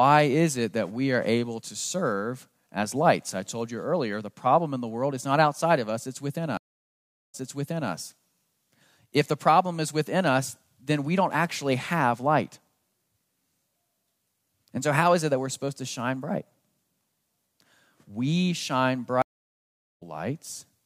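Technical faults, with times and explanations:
6.57–7.91 s and 19.22–20.03 s, stream reconnect: the link dropped, giving silences of 0.76 s and 0.79 s while the player reconnected and restarted its decoder. The first resumes 0.58 s earlier, replaying resent speech; the second jumps roughly 0.7 s ahead, skipping some.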